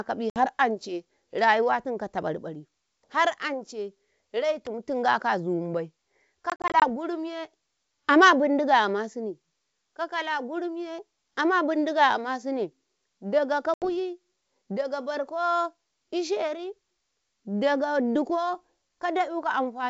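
Packet loss on an ADPCM call breaks up this wideband speech recording, carried over G.722, whose upper band stays clear. Dropped packets leave hard-edged silent holes, and the decoder's predictor and step size then drift from the sender's, so speech resumes with brief, slight distortion. The holes fall at 0.30–0.47 s (60 ms lost, about three packets), 6.50–6.90 s after "tingaka azumibai" (140 ms scattered over 320 ms, longest run 40 ms), and 13.74–13.89 s (80 ms). At 4.67 s, just before "tingaka azumibai", a sharp snap or tight cluster of clicks rides on top of the sound, likely an electrical switching spike from a nearby switch, motor or static discharge arcing into the audio line.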